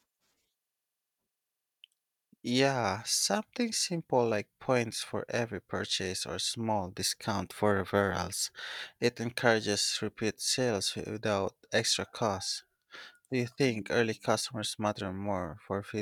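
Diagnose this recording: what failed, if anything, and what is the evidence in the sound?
Nothing failed in this recording, and the sound gives no evidence of any fault.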